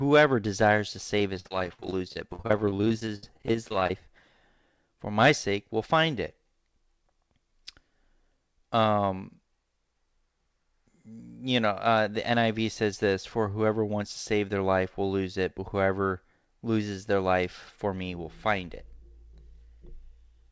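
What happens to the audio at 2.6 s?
That's repeated packet loss, 1.19 to 3.94 s, right after "desires to": dozens of brief holes get patched by stretching the last sound, so the speech turns choppy and robotic.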